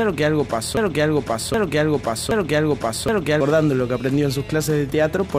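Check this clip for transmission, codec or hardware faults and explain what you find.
One fault is present: a broken-record loop. From 0.77 s to 3.41 s, a 0.77 s fragment repeats exactly three times back to back, likely because the player, encoder or stream stalled and kept resending its last buffered piece. Whatever should have played there is lost. The waveform shows identical blocks, and the spectrogram shows the same pattern tiled repeatedly.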